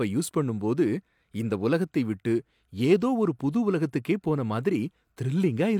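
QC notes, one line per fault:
No technical faults are audible anywhere in the speech signal.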